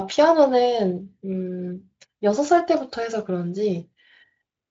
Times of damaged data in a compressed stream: none

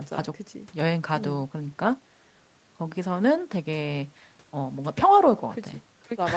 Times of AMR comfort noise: none

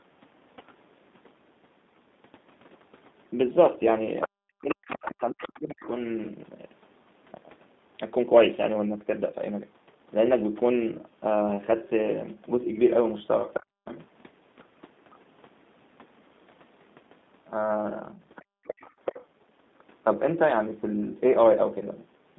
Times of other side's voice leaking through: 4.88-5.88

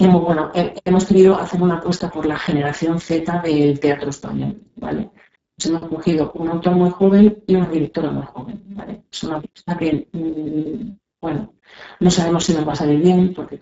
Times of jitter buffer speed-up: none

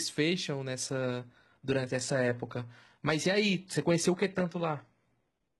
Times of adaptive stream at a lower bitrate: 0.88-5.60

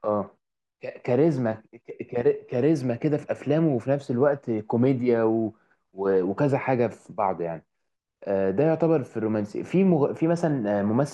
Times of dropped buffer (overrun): none

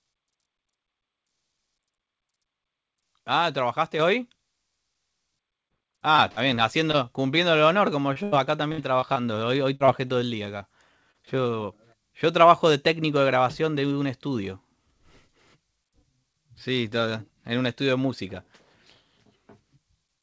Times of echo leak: none

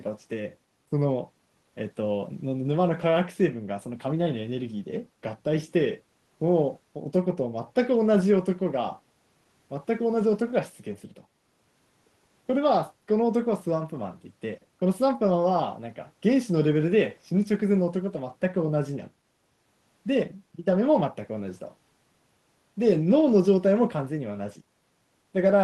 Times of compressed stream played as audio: none

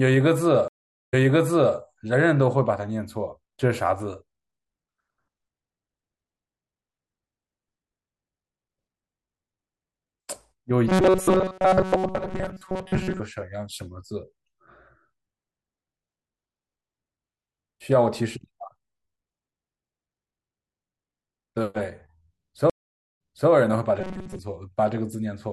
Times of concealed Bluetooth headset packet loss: none

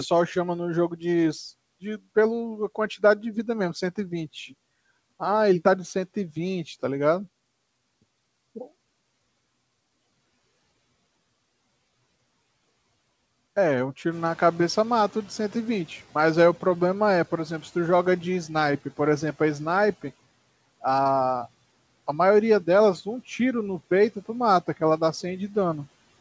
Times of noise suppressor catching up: 14.11-17.29

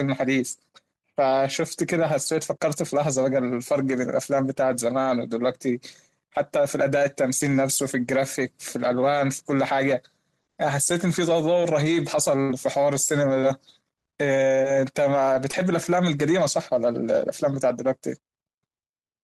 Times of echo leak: none

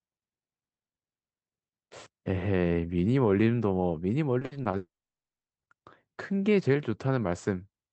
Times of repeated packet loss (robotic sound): 4.39-4.75

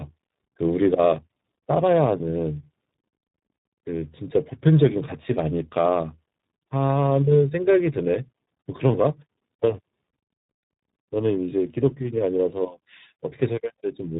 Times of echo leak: none

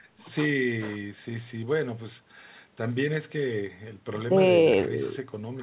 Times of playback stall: none

